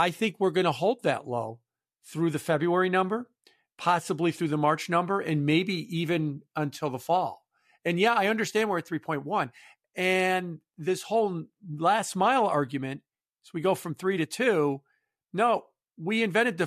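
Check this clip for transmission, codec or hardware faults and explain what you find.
Nothing stands out here: the speech comes through steady and whole, with no dropouts, glitches or damage anywhere along the way.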